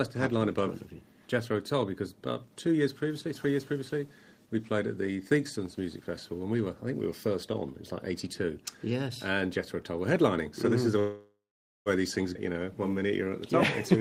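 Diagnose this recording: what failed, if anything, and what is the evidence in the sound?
Network stage, call audio freeze from 10.99 to 11.89 s: the last sound is stretched, then silent for about 0.49 s, and playback resumes intact. Likely delayed packets emptied the jitter buffer.

Network and jitter buffer, skip ahead at 12.34–12.38 s: roughly 0.4 s of audio is dropped, and the two sides are joined almost directly with a tiny fill.

Jitter buffer slow-down from 12.53 to 13.31 s: repeated pitch periods add 96 ms, so playback runs at 89% speed with unchanged pitch to rebuild the buffer reserve.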